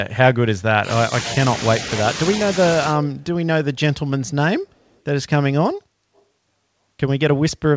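From 0.79 to 0.89 s the speech dips by roughly 10 dB for about a tenth of a second. This is speech suppressed in double talk, likely an echo canceller ducking the talker while the far side spoke. Unlike a dropout, the sound dips rather than vanishing.

At 4.65 to 4.99 s, and again at 6.16 to 6.22 s, a very faint copy of the speech trails it by 287 ms. This is an echo leak, likely loudspeaker sound slipping past the canceller. The fixed delay separates it from room reverberation, which would smear rather than repeat.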